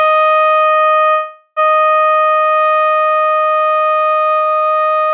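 A piece of music, heard through a narrow call channel with nothing above 4 kHz, stalls from 1.10 to 1.59 s. The last moment of sound is stretched into a fading smear for about 464 ms, touching near-silence only briefly, then the music resumes exactly where it stopped, now running about 464 ms late. This is a call audio freeze, likely from delayed packets draining the jitter buffer, so the receiver filled the wait rather than dropping any music.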